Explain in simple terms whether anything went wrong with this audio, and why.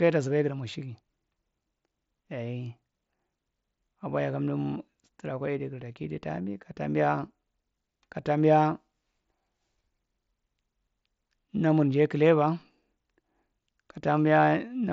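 Nothing went wrong with this speech recording; it simply went through a Bluetooth headset's mSBC codec, which keeps the sound up to about 7.7 kHz and leaves only a light codec trace.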